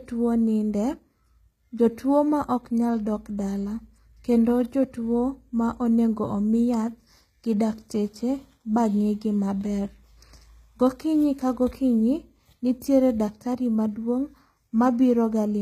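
Throughout the speech, the treble sounds synthetic: s sounds come out gritty and metallic, and nothing is present above 14.9 kHz. This is likely HE-AAC compression, with damage that fits a bitrate near 20 kbps, rebuilding the highs by copying lower bands upward.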